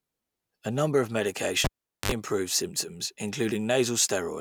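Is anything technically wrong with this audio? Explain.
Yes. From 1.64 to 2.12 s, a cable pulled and plugged in: a pop, about 425 ms of near silence, then 60 ms of 50 Hz mains buzz before a second pop.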